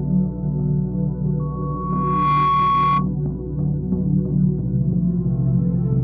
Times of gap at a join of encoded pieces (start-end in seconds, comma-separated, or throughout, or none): none